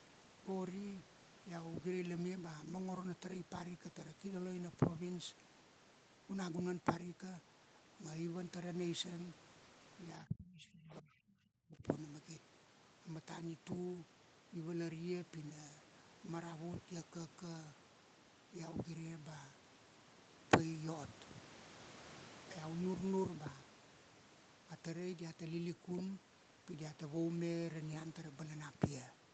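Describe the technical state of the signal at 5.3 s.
At 5.3 s the speech is intact, with no fault at that moment.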